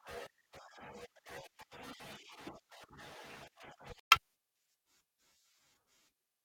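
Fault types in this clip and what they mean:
Bluetooth stall: At about 4.00 s the speech cuts abruptly to silence for roughly 117 ms, until 4.11 s, and then carries on with no fade in or out around the gap. The likely cause is a wireless link hold-up, where radio interference delayed packets on their way to the headphones, their small playback buffer emptied, and output simply stopped until the retransmitted audio arrived and refilled it.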